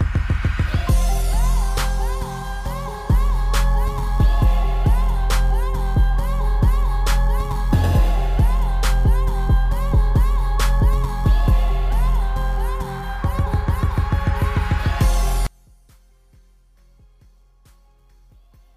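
From 15.47 s to the end at 18.77 s, the sound suddenly drops by about 36 dB and turns faint. The likely cause is one channel inverted: with one stereo side's polarity reversed, everything common to both channels cancels when summed to mono, leaving only their small difference. On a waveform the envelope collapses to a sliver; a spectrogram shows the energy abruptly fading.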